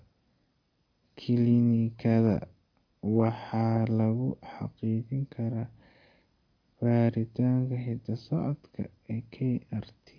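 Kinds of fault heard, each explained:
No technical faults detected.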